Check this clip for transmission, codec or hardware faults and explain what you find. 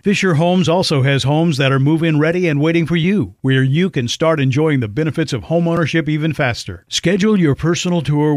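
One fault turns up in this speech clip: a single sharp tick at about 5.77 s. It is a block of digital silence, roughly 2.5 ms of audio dropping out with no fade. The abrupt cut out and back in creates the click, most often because the output buffer wasn't filled in time.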